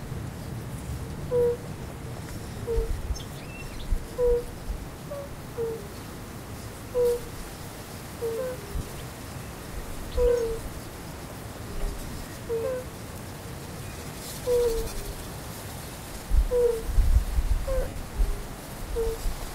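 Around 8.74 to 8.84 s, 14.84 to 14.92 s and 17.82 to 17.96 s you get lost LE Audio frames: the LC3 decoder fills gaps of about 80, 60 and 100 ms by reusing the last spectrum with random signs, so tones smear into brief noisy hiss and dip.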